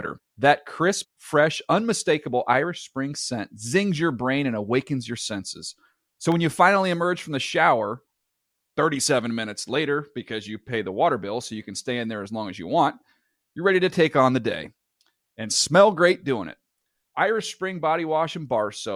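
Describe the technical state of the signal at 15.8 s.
At 15.8 s the speech signal is intact, with no audible technical fault at that moment.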